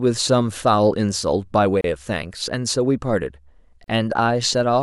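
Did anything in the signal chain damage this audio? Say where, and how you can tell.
Yes. The speech drops out at 1.81 s for 31 ms and at 3.84 s for 38 ms, two seconds apart, then resumes where it stopped. This is a gap at a join of encoded pieces: the codec segments were joined untrimmed, leaving each segment's encoder delay and end padding in place.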